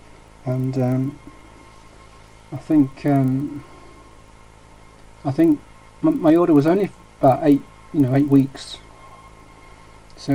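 From start to finish the audio carries an even ticking at 25 per second, the sign of a resampler restarted on every block. The converter, which points to a doubling from 24 kHz to 48 kHz, treated each 40 ms block in isolation, so every block edge lacks its true neighbouring samples and picks up a small error. Unlike mains hum, the buzz follows the signal and vanishes in silence. Unlike dropout clicks, it keeps a perfectly regular spacing.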